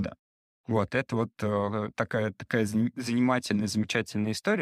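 Listening to this speech recording, nothing stood out as a technical problem.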